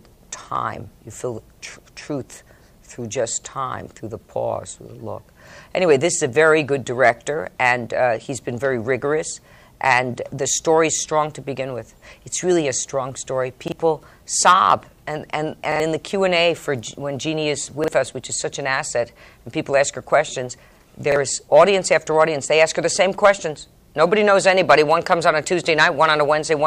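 New audio failed to reach the playback device in time on four occasions, so it replayed the last block it held, a length that fits a 40 ms buffer. These are repeated buffers: at 13.68 to 13.72 s, 17.84 to 17.88 s and 21.12 to 21.16 s the same fragment sounds twice, and at 15.72 to 15.80 s three times. Each hard join gives a quick stutter, and the real audio skipped during the gap, about 40 ms each time and about 70 ms at 15.7 s, is simply missing.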